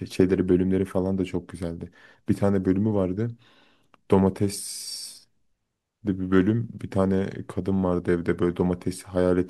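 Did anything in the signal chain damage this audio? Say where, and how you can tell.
No, nothing along the chain has left an audible mark on this speech recording.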